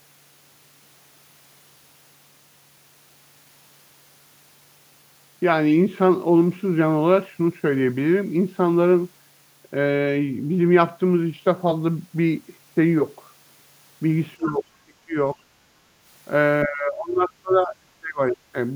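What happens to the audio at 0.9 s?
Nothing goes wrong at 0.9 s; the speech carries on intact through that moment.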